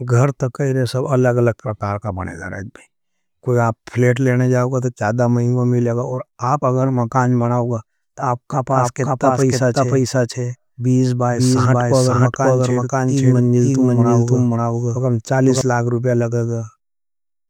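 A doubled audio track runs from 8.71 s, after "मकान बनाओगा तो आपका", to 15.61 s, before "लाग रुपया". A dry, full-band copy of the speech trails about half a second behind at roughly equal level, switching on and off abruptly, likely from a second, slower capture path.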